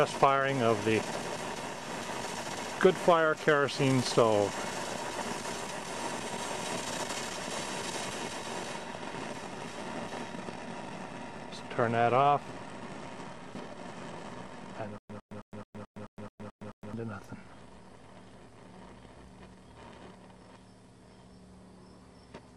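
From 14.98 to 16.93 s the audio breaks into a stutter with silent gaps: a burst of about 103 ms repeats nine times at a steady pace of roughly 217 ms, each separated by about 114 ms of dead digital silence, and whatever should have played across those two seconds never arrives. The likely cause is a playback or stream stall, where each retry replays the last buffered fragment before running dry again.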